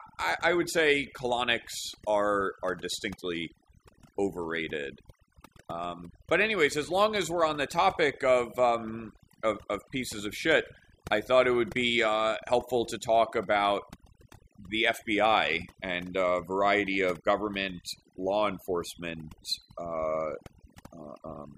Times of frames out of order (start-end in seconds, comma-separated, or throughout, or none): none